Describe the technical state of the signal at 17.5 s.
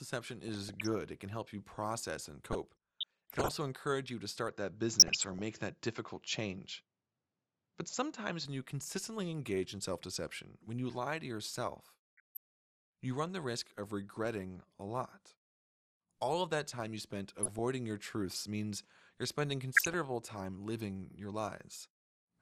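At 17.5 s the signal is inside a burst of DAB burbling running from 17.38 to 17.59 s, between "that time you spent" and "your truths means you're". Bit errors slipping past error correction, at a rate around 0.2 percent, corrupt samples and scale factors, which fits roughly a dozen damaged frames. Individual sub-bands jump in level frame by frame, giving a bubbling, squelchy chirp. A spectrogram shows blocky horizontal patches flaring on and off at frame intervals, and the waveform shows abrupt, uneven envelope spikes.

Underneath, the whole recording carries audible MP2 compression, likely from MPEG Layer II coding at a rate that fits about 80 kbps. Too few bits leave upper sub-bands switched off or flickering, and the remaining bands are coarsely quantised, so the sound is dull with a gurgling, granular edge. On a spectrogram the top end is cut off in a ragged way, with gaps opening and closing in the high bands.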